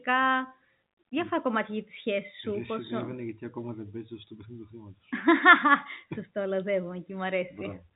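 No technical fault is present in this speech clip, which carries the band limit of G.711 telephone coding, with nothing audible above about 3.8 kHz and at most a faint level-following hiss from the logarithmic 8-bit quantisation.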